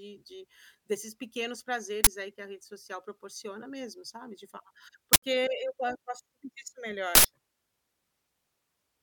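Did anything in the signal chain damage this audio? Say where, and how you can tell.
Yes: an uninitialised buffer at the driver or buffer stage. Harsh digital-noise bursts replace the speech at 2.04–2.07, 5.13–5.22 and 7.15–7.25 s, where stale memory was played as samples. A dropout would go silent instead. These 23 and 93 ms blocks fit 1024- and 4096-sample buffers.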